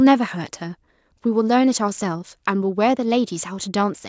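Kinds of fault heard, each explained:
Nothing wrong turns up here, just speech that's come through a call's microphone processing, so there's nothing above 8 kHz and the lowest bass is trimmed away, which is normal for that path.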